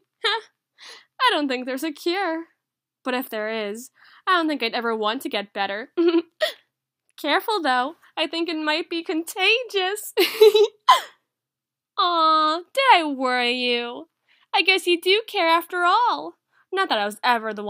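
No technical faults can be heard anywhere in the audio.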